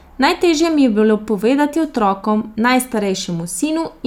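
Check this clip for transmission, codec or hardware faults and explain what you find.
Nothing stood out on listening to this speech recording.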